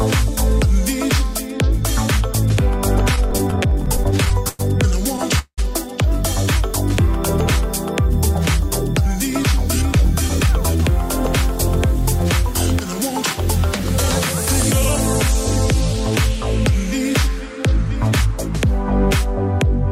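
From 3.15 to 5.60 s the sound stutters in repeated stalls: packets arrived late, so the jitter buffer ran dry 19 times, and the receiver stretched the last sound over 461 ms, with the longest gap at 187 ms. The waveform shows smeared, repeating blocks, and the spectrogram shows held harmonic bands.

Jitter buffer speed-up follows at 9.98 to 10.91 s (107 % speed) and 11.68 to 13.85 s (103 %). The buffer trimmed excess delay by cutting short pitch-period pieces, about 70 ms per stretch, so the sound runs faster without a pitch change, hurried in the first stretch. The spectrogram shows events packed slightly closer.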